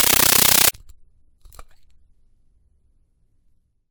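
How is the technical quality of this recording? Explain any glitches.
The opening is badly damaged. Compressed stream played as audio, 0 to 0.74 s: undecoded AC-3 data is output as samples, giving loud chattering static, 13.3 ms noise bursts repeating 31.25 times a second.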